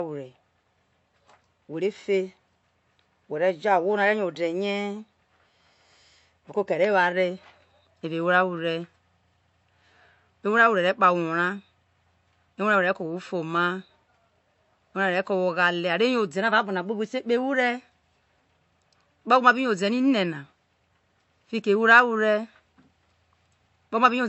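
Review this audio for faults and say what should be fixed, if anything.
The speech has nothing above 8 kHz for the whole clip, and low-bitrate coding artefacts persist throughout. This is likely low-bitrate audio saved at a high bitrate. An earlier MP3 pass, consistent with roughly 48 kbit/s, removed detail. The later high-bitrate MP3 cannot restore it. Prevent this by encoding once, from the original uncompressed source, at the final bitrate.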